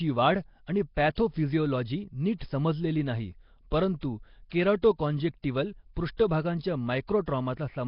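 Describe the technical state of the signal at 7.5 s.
At 7.5 s the speech still has the rough, hissy halo and smeared, underwater feel that runs through the whole clip, with nothing above 5.3 kHz. That's likely heavy Nellymoser compression, with weak bands given no bits and filled with noise, consistent with roughly 22 kbps.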